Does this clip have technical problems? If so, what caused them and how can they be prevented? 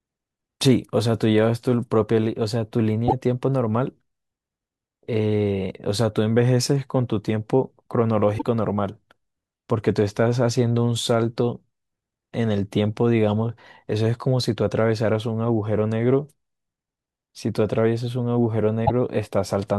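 Yes. Damaged data in a compressed stream produces short glitches in the speech at 3.05–3.13 s, 8.35–8.43 s and 18.82–18.91 s, where the decoder misreads corrupted frames and then resyncs. Checksum-verified transfers and error-protected containers prevent this.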